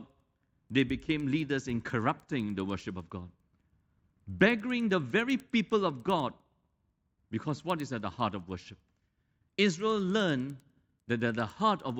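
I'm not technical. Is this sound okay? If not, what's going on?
No. All the way through, the speech carries a steady ticking, about ten ticks a second. This is a resampler restarted on every block. Converting the recording from 16 kHz to 48 kHz was done in separate 100 ms chunks, and each chunk's edges were handled without the neighbouring sound, leaving a tiny flaw at every join. Unlike hum or buzz from a power line, these ticks stop in the pauses and sit only under the speech, keeping perfectly even timing.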